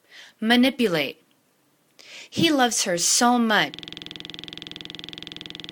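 From 3.74 s until the clip ends, the audio locks into a rapid, rattling buzz. A single 46.44 ms fragment repeats over and over, 43 times, at a rate of 21.5 Hz, so the sound becomes a mechanical drone pitched at the loop rate. This is a system hang loop. The computer or its audio driver stalled while the sound hardware kept replaying the same ring buffer, which fits a 2048-sample buffer.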